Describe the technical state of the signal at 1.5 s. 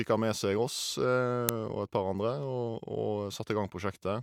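At 1.49 s an uninitialised buffer plays about 1.3 ms of leftover memory as samples, a loud crack fitting a 64-sample block.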